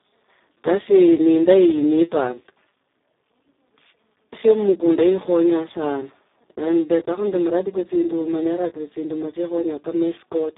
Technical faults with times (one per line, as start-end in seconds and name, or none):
0.00-10.58 Speex codec